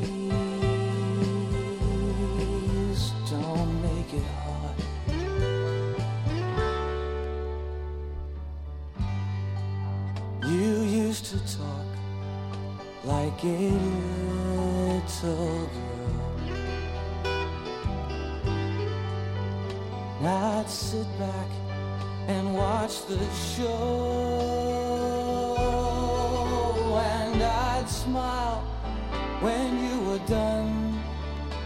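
No technical faults can be heard anywhere in the clip.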